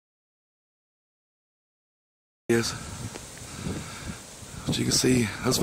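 From the very start to about 2.50 s there's an audio dropout to silence: pure silence, no room tone at all, then the sound kicks in already mid-flow. Most likely the input was lost, say a disconnected device or a stray mute, while recording carried on.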